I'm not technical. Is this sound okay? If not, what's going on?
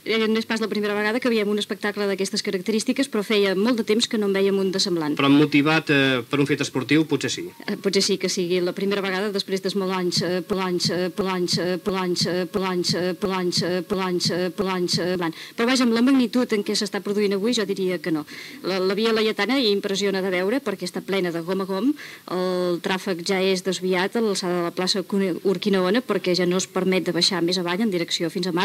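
No. From 10.53 to 15.15 seconds there is a broken-record loop. One short piece, about 0.68 seconds long, plays seven times in a row. The sound that belonged there is missing. The likely cause is a player or stream that stalled and replayed its last piece.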